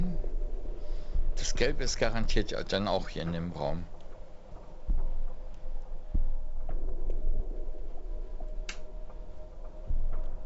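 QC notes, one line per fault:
No faults heard.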